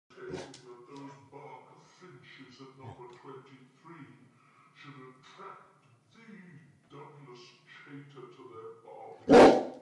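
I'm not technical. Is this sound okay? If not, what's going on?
No. This has a wrong sample rate: it plays slower than recorded, so the whole sound runs at two-thirds speed and about seven semitones lower, consistent with 48 kHz audio played at 32 kHz.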